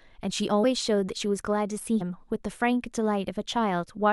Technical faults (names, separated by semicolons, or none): compressed frames skipped